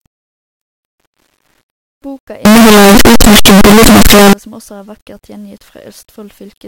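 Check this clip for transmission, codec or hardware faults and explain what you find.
One fault stands out, in the middle of the speech.

From 2.45 to 4.33 s, just before "som også er vakkert", the speech turns into very loud, harsh distortion, and even quiet moments are as loud as strong ones. The likely cause is signed and unsigned samples mixed up in an 8-bit stream: the top bit flips, so every zero crossing jumps across the whole range. The distortion stays just as loud regardless of the speech's own level.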